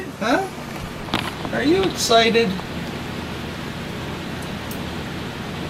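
At 0.31 s there is a single sharp click, visible as a thin vertical line across the spectrum. The likely cause is dropped samples: a tiny fraction of a millisecond of the stream went missing, so the waveform jumps straight from one value to a later one instead of moving smoothly between them. The gap is far too short to remove any audible sound. What remains is the discontinuity itself, heard as one brief broadband tick.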